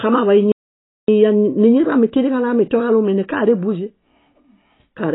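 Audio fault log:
throughout — AAC compression: The speech sounds dull and boxed-in, with nothing above 3.9 kHz, so sibilants lose their edge and turn fizzy or smeared, and sustained vowels carry a warbling texture. This is likely heavy AAC-LC coding at a very low bitrate, which fits something around 16 kbps. With so few bits, the encoder drops the top of the spectrum entirely and quantises the remaining bands coarsely, leaving gaps and swirling artefacts across the voice.
0.52–1.08 s — playback stall: The speech cuts out abruptly in mid-flow and the output falls silent for about 0.56 s before carrying on. The break is a dead gap where the sound should continue, and then it resumes. The likely cause is the player running short of data or having its audio thread blocked, so nothing reached the output until it caught up again.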